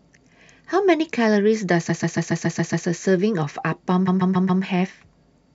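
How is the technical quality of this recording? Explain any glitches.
The recording has two stutters from repeated frames. From 1.88 to 2.86 s, a 0.14 s block of speech replays seven extra times. From 4.07 to 4.62 s, it replays four times. A short run of compressed frames was sent again, which fits a block of about six frames. The two repeats add 0.98 s and 0.56 s.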